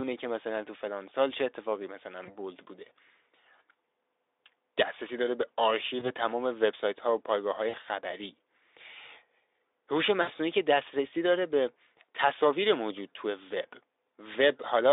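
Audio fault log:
2.25–2.37 s, 5.99–6.10 s, 7.69–7.75 s, 10.21–10.29 s: VoIP packet loss concealed by the speech codec. Gaps of 20, 20, 40 and 60 ms, fitting one, one, two and three lost frames, are filled by the decoder repeating its last pitch and filter at falling gain. On a spectrogram this shows as smeared, evenly spaced harmonic bands inside the 300 Hz to 3.7 kHz line band, and on the waveform as a fading, overly regular buzz before the signal recovers.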